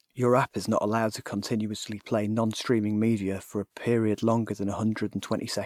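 No technical faults are audible in this recording.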